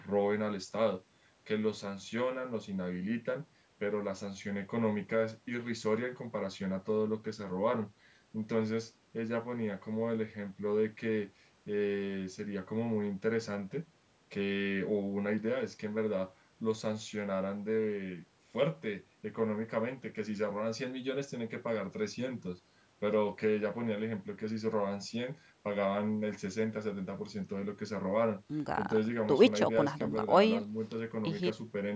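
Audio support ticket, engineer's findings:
No faults found in the speech audio. Call microphone processing is audible as expected: lowest bass trimmed by its high-pass filter, nothing above 8 kHz.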